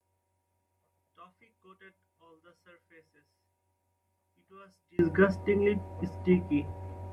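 A speech recording whose level drops by about 33 dB from 0.0 to 4.99 s, leaving a faint residue where the centred voice should be. The likely cause is one channel inverted: reversed polarity on one side cancels the shared signal when summed to mono.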